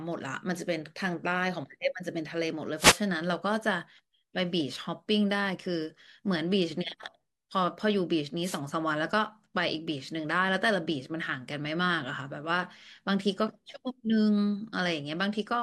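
The radio link from an analogue FM wireless microphone faded twice, letting receiver noise swell over the speech: wireless microphone noise hits at 2.76 to 3.01 s and 8.42 to 8.60 s, each a brief swish or burst of static.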